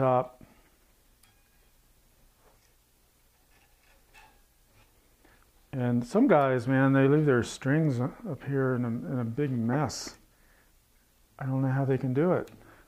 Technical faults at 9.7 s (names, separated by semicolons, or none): corrupt frame decoded